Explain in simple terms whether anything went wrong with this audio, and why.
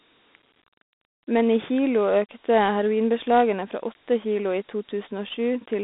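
Throughout, the speech sounds thin, phone-like and gritty with a hiss. That is Dialogic VOX ADPCM, a coarse phone-system format that cuts everything above 3.8 kHz.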